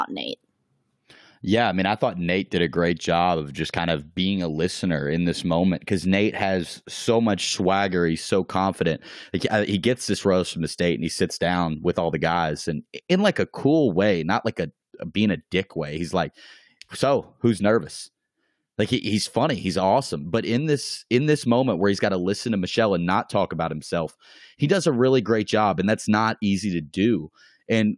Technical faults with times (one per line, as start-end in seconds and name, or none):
none